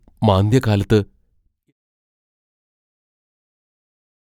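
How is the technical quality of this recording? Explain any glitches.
No technical faults are audible.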